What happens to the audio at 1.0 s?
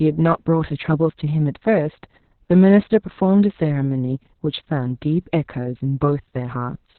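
At 1.0 s the speech is muffled, hoarse and slightly robotic, with nothing above about 4.2 kHz. This is Opus voice compression across the whole clip: the SILK coder, narrowed to narrowband and coding the excitation coarsely, which fits a bitrate near 6 kbps.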